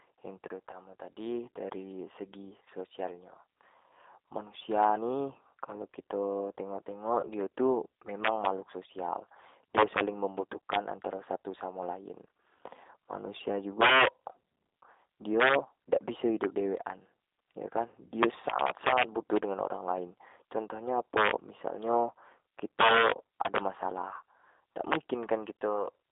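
Speech heard through the G.729 codec throughout, with damage that is plainly audible: the voice has the slightly rough, synthetic edge of a low-rate model that rebuilds each 10 ms frame from a vocal tract filter, a pitch predictor and a few pulses, which fits an 8 kbit/s G.729A stream. The line band is about 300 Hz to 3.7 kHz, so a spectrogram shows a hard ceiling near 3.7 kHz and almost nothing below 300 Hz, with smeared, grainy harmonics in between. On top of this there are two spots of VoIP packet loss concealed by the speech codec, at 0.71 to 0.78 s, just before "tadi dari segi", and at 7.21 to 7.28 s, just before "tu memang makhluk social". Each fits a single lost 20 ms packet. The decoder fills the gap by extending its last pitch and filter at falling gain, so each spot is a brief stretched sound that fades. Because each frame builds on the one before, the voice stays weak or distorted for tens of milliseconds or more after packets return. 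A waveform shows a short dip in level at each of these times.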